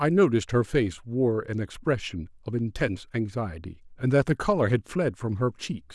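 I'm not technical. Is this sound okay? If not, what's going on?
Yes, this speech recording sounds fine, and there is nothing wrong to point to. No dropouts, glitches or other technical problems can be heard anywhere in it.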